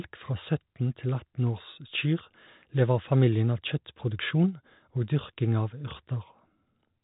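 Nothing is technically wrong with this speech clip, which has the narrow, telephone-like band of ordinary G.711 coding.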